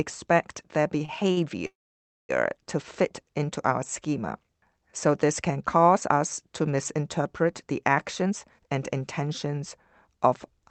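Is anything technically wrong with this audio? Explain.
Yes, there are three kinds of fault in this speech clip, all from the receiving side of a call connection.

Short stalls from a late packet occur at 1.05 to 1.10 s and again at 1.32 to 1.39 s. Each time a packet had not arrived when it was due, so the jitter buffer ran dry and the receiver held the last sound until the packet turned up, roughly 26 ms the first time and 50 ms the second. Nothing is lost, but the sound sticks briefly with a faint buzzy drag.

A call audio freeze runs from 1.67 to 2.31 s, ending just before "to fit into our". The likely cause is packets held up in transit, emptying the jitter buffer for much longer. The receiver extends the last sound into a fading buzz, then about 0.57 s of silence, and resumes exactly where it stopped. This inserts a gap of about 0.63 s with no speech dropped.

The jitter buffer speed-up starts right after "us to misinterpret the", from 8.22 to 9.61 s, with a milder one from 10.07 to 10.60 s. 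The buffer held more than its target. The receiver cut tiny pitch-period-length slices many times over, removing about a fifth of a second in the first stretch and a twentieth of a second or so in the second. Speech runs about 12% and then 7% fast at unchanged pitch, sounding hurried.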